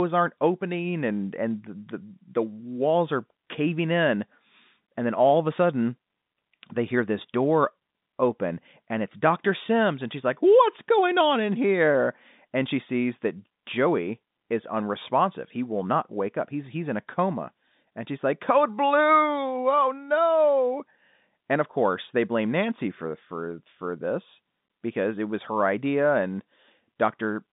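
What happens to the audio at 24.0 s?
Nothing goes wrong at 24.0 s, and the speech carries on intact through that moment.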